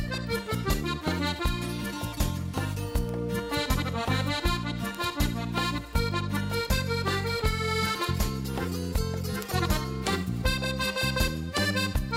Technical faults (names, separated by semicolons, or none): bit error spike